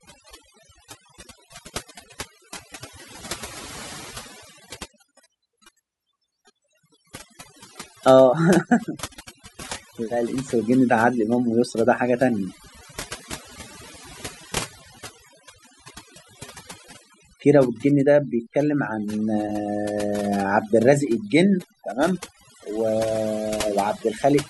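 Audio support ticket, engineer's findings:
Background dropped throughout, breaking up into twinkling specks between phrases. Overdone noise removal, denoiser set far too strong. Bands near its noise estimate pushed down or muted outright, taking quiet speech components along with the noise.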